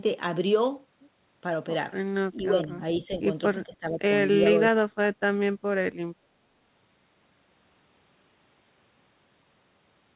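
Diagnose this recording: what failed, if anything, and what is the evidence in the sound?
Speech dips at 2.36–2.8 s, 3.0–3.2 s and 3.66–4.02 s by about 10 dB, then drops about 25 dB at 4.59–5.14 s. That's call processing, likely speech suppressed in double talk: the echo canceller ducked this talker while the far end was playing on the loudspeaker.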